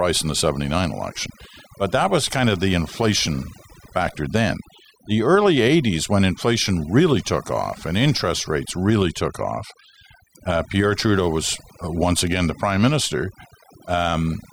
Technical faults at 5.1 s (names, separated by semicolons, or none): overdone noise removal